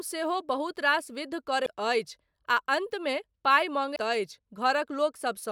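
A brief glitch cuts through the speech at 1.65 s, and a second one follows at 3.95 s, just after "अन्तमे पाइ". Both are damaged data in a compressed stream. Bytes in the encoded file were lost, zeroed or overwritten, so the decoder misread those frames, lost its place in the bitstream and had to search forward for the next valid frame header. Each glitch lasts only about 13 to 14 milliseconds before normal decoding resumes.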